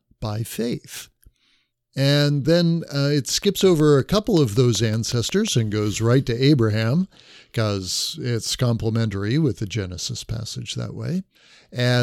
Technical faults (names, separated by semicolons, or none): train of clicks